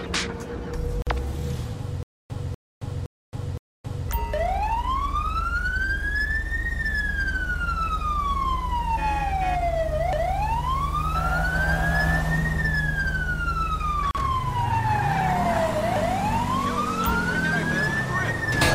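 The audio drops out twice with a gap at a join of encoded pieces: about 47 ms from 1.02 to 1.07 s, and about 38 ms from 14.11 to 14.15 s. Each is a short hole of silence with softened edges, after which the sound picks up right where it left off. That's what you get when separately encoded segments are butted together without trimming, so the encoder's start-up delay and the padding on the last frame both end up in the joined file.

Between 2.03 and 4.09 s there's a stutter with silent gaps. A burst of about 245 ms plays, then about 271 ms of dead digital silence, and this repeats four times on a steady cycle of roughly 515 ms. It's likely the player or stream stalling and replaying its last buffered fragment on each retry before running dry. Whatever audio belonged in that stretch never plays.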